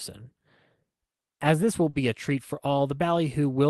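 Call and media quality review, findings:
Short concealed packet loss: brief smears at 1.11–1.15 s, 1.35–1.41 s and 1.89–1.95 s. Component: receiver decoder concealment behind the jitter buffer. Mechanism: about 20 to 40 ms of audio missed its playout deadline, was extrapolated from the preceding waveform, then blended back. Speech band tops out near 12 kHz, consistent with an Opus call path.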